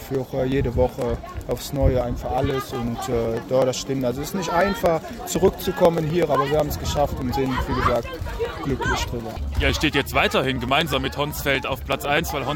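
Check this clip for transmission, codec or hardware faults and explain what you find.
A steady run of small ticks sits on the audio from 0.15 s to 12.42 s, one every 0.124 s, about a hundred in all. These are periodic USB or driver dropouts. At that fixed interval something stalls the USB bus or the audio driver, and roughly a millisecond of signal is skipped each time. The join across the gap makes a tiny discontinuity, heard as an evenly spaced click wherever sound is present.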